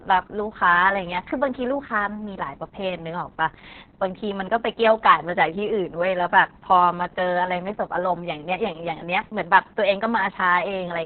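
Opus voice compression runs throughout this speech. The SILK coder at about 6 kbps cuts everything above 4.4 kHz, leaving it muffled, hoarse and slightly robotic.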